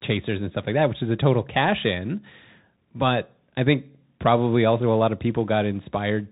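Throughout the speech the sound is dull and boxed-in, with nothing above 4 kHz, scratchy s sounds, a granular hiss underneath, and distortion on loud high passages. This is the Bluetooth CVSD headset codec, whose one-bit slope tracking, here consistent with 64 kbps, cannot keep up with fast changes.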